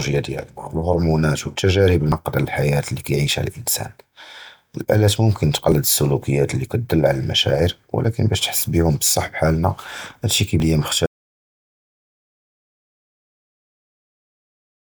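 A speech recording with two kinds of fault. At 2.12, 5.72 and 10.6 s the speech jumps ahead, losing roughly a tenth of a second at the first and third and a few hundredths at the second. No gap is left, which sets this apart from a dropout; the likely cause is a dropped buffer (overrun), with unread samples overwritten and the surrounding audio spliced together. From 11.06 s to the end the sound cuts to silence with no room tone at all, an audio dropout to silence that likely comes from the input being lost while silence kept being written.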